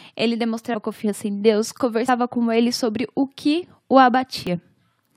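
Compressed frames skipped at 0.73 s, before "confiança em", at 2.08 s, before "com ele sobre o", and at 4.47 s, after "sobre o que o". Missing frames make the speech jump ahead by roughly 70 to 100 ms.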